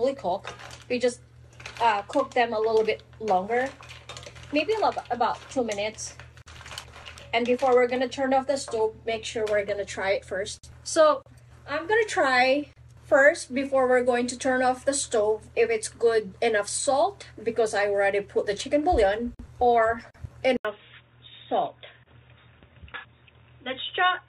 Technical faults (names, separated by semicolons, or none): input switched to a poorer device